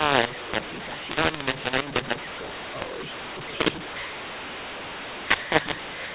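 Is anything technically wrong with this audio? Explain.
Yes. Throughout the clip there is a mu-law and A-law mix-up: the A-law telephone speech has been decoded as mu-law. The mismatched curves scramble sample levels and lift quiet samples well above silence. The result sounds harsh and distorted, with noise filling the pauses. On the waveform the peaks look jagged and uneven, and the floor between phrases is raised. On the spectrogram, broadband hash fills the gaps. Everything stops at 4 kHz, which fits 8 kHz G.711 coding.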